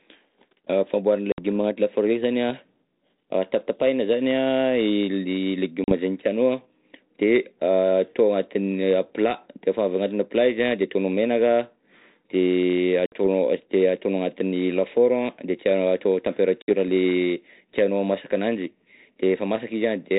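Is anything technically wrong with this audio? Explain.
Yes. Packet loss on an ADPCM call occurs at 1.32, 5.84, 13.06 and 16.62 s, each a gap of about 60 ms, except 40 ms at 5.84 s, where a few packets went missing and were filled with silence. Because this 32 kbit/s G.726 stream codes only differences from a running prediction, the receiving decoder's predictor and step size drift from the sender's. Each sharp-edged dropout is followed by speech returning with brief distortion that settles within tens of milliseconds.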